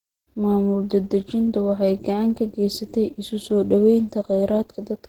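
Throughout, the speech has likely passed through Opus compression in its hybrid speech mode, which fits a low rate near 16 kbps. The damage is plainly audible: a hoarse, grainy, somewhat muffled texture, though the band still reaches 20.3 kHz.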